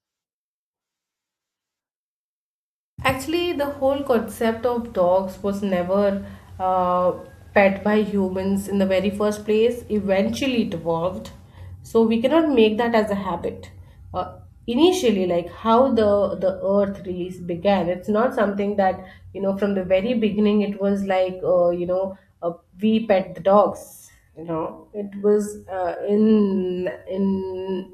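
From 23.75 s to the end of the clip at 27.94 s, the speech runs at about 0.6 times its normal pace while its pitch stays put, a time-stretched section. The change in pace is abrupt, and the slowed speech drags. The likely cause is software lengthening the audio by repeating short slices. On a spectrogram, harmonic spacing is unchanged but syllables are drawn out. The waveform shows longer, repetitive envelopes.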